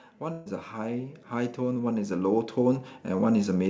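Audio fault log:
0.2–3.63 s, automatic gain rising: the gain control judges the input too quiet and slowly lifts it by about 11 dB, so speech and background swell together. The waveform envelope widens steadily, and the spectrogram brightens overall, noise floor included.
0.32–0.48 s, burst of packet loss: roughly 140 ms never arrives in time. The receiver holds and fades the last sound, giving a buzz or hiss, then resumes later with that stretch missing. Spectrogram shows frozen, dimming bands; the waveform repeats and decays.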